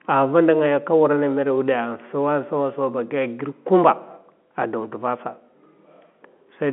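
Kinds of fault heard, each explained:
The speech arrives through ordinary G.711 mu-law telephone coding at 64 kbps, with the expected line band of about 200 Hz to 3.4 kHz, nothing above 3.8 kHz, and only faint quantisation noise riding under the signal, and no fault can be heard in it.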